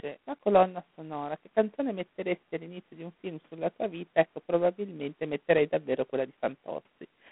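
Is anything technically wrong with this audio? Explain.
Yes. The speech is coded with G.726 ADPCM throughout the clip. This codec stores each sample as a few bits describing its difference from an adaptive prediction. Too few bits leave a large quantisation error that rides on the signal. Here a harsh, rasping hiss follows the speech level and is plainly audible, which fits the 24 kbit/s mode. The band is telephone-narrow, roughly 150 Hz to 3.4 kHz, and nothing above 3.8 kHz remains, so the sound is muffled and thin.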